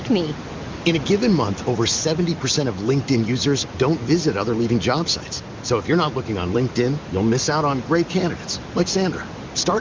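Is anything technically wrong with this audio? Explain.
No, nothing is technically wrong: the speech is band-limited to about 7 kHz, as expected from a wideband call path running at a high rate, and the room noise sits about 15 dB under the speech.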